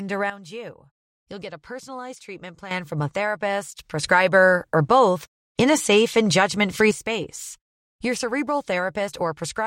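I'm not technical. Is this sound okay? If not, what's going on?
No. There are sudden gain jumps: speech and background drop quieter from 0.30 to 2.71 s, then get louder from 4.03 to 6.91 s, likely abrupt level changes.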